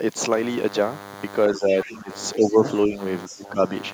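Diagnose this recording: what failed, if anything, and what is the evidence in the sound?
DECT cordless phone buzz, analogue wiring: from 0.33 s to the end, a thin 100 Hz buzz sits about 20 dB below the speech. The spectrogram shows evenly spaced horizontal harmonic lines, consistent with rectified radio bursts.

Speech suppressed in double talk, call processing: the waveform envelope dips at 1.53–2.10, 2.35–2.63, 2.87–2.97 and 3.28–3.59 s, by up to about 15 dB. The echo canceller likely attenuated the talker while both sides spoke.

Other side's voice leaking through, call processing: faint separate harmonic traces appear at 1.71–1.87, 2.39–2.53 and 3.27–3.39 s, about 20–25 dB below the speech. This is likely residual loudspeaker echo the canceller missed.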